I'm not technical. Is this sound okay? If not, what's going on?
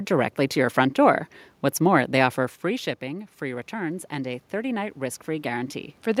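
No. Around 2.5 seconds the speaker drifts away from the microphone, and from 2.63 to 6.16 s automatic gain rising kicks in. The recording level climbs gradually, so the voice and the room noise swell louder together. A person moving would change only the voice.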